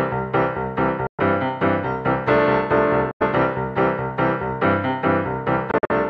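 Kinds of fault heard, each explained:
Bluetooth dropout: Audio packets likely failed to reach the headphones in time and were discarded, so the output falls silent until valid data returns, then resumes further along as if it had kept playing. Holes open at 1.07 to 1.20 s, losing about 116 ms, and at 3.11 to 3.22 s, about 93 ms. From 5.71 to 5.91 s the gaps come in broken bursts spread over roughly 186 ms, the longest about 46 ms.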